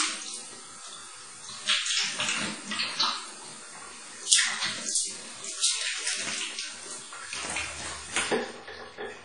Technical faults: WMA compression

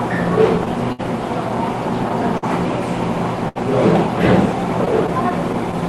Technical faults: clock drift between sender and receiver; short stall from a late packet; scattered short gaps

